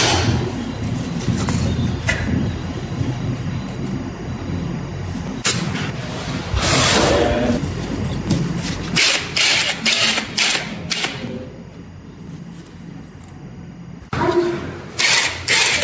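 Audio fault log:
throughout, timecode bleed: a faint chirping warble sits about 35 dB under the sound, flipping between tones near 1 kHz and 2 kHz at a rhythm that fits 23.976 fps code. The two-pitch switching separates it from steady hum or a single whine.
throughout, gain pumping: the gain ducks under each loud moment, with the level swinging around 15 dB, squashing loud and soft together. This is likely an over-driven microphone gain caught by a fast limiter. Unlike the call processing, which only trims content above 8 kHz and the lowest bass, this movement tracks the sound's loudness.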